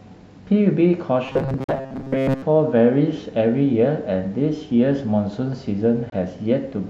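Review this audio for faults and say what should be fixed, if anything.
From 1.26 to 2.43 s the speech becomes a rigid metallic buzz at 134 Hz. This is robotic sound from repeated short buffers: a segment of roughly 7.5 ms, likely repeated because audio arrived late. Unlike a dropout, it repeats audio rather than leaving silence. Fix it by giving the playback path a larger buffer so it is fed on time.

At 1.64 to 1.70 s and 6.10 to 6.13 s the sound cuts out to silence, losing about 43 ms and 21 ms, then resumes as if it had played on. This is a Bluetooth dropout, likely from packets arriving too late. It leaves a hole rather than a buzz. Fix it by reducing wireless interference and distance, or by using a wired connection.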